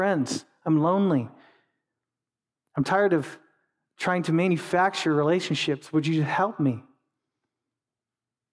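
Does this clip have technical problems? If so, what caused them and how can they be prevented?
No, there are no technical problems to fix here.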